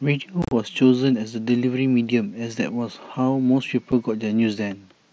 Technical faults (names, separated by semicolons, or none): unconcealed Bluetooth headset packet loss